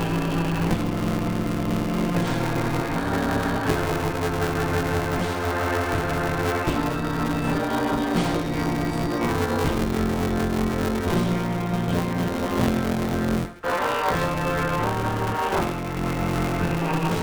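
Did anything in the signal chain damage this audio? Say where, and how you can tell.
Yes. Buffer tearing runs through the whole clip, at the driver or buffer stage. A steady robotic buzz at 172 Hz rides on the sound and is there only when signal is present, which fits a 256-sample buffer. The writing program and the hardware reader have drifted until they cross inside every period. Somewhat under half of each buffer is stale audio from roughly 20 ms earlier, with hard joins on both sides.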